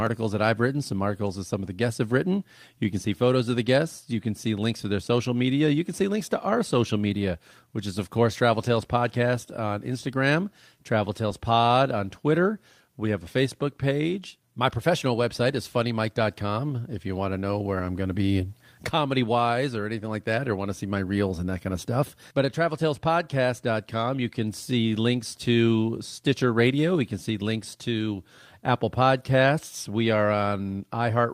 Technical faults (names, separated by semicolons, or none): lost packet rebuilt from error correction